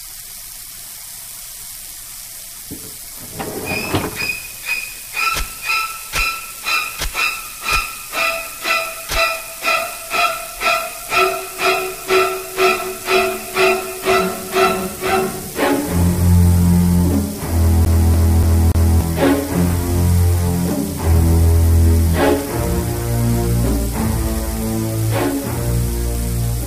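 From 17.85 to 19.01 s the CD is stuck on one turn: the laser jumps back each revolution, repeating the same 0.29 s segment four times with a brief mute between.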